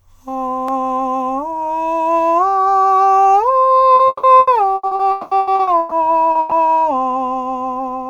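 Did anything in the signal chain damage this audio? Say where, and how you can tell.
Yes. The network path dropped or delayed packets again and again between 3.95 and 5.94 s. This is repeated packet loss, heard as a robotic sound. There are about a dozen holes in that stretch, the longest 200 ms, and together they fill nearly half of it. Each time, the decoder stretches the last received audio to cover the hole, and the next hole arrives before the music has properly recovered. The result is choppy, with chunks of the real music gone.

At 6.31 to 6.38 s, just after that stretch, there is one short concealed packet loss. About 40 ms of data arrived too late or not at all. The receiver extended the preceding sound across the hole and then blended back into the real signal. This leaves a brief smear or wobble where the true 40 ms of music should be.

Almost immediately afterwards, from 6.39 to 6.54 s, a burst of packet loss takes out about 120 ms in a row. 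The concealment continues the last sound and turns it down as the gap lengthens, so it never drops to silence. You hear a held buzz or hiss that fades over the gap. The music then resumes further along, and everything that belonged in those 120 ms is missing.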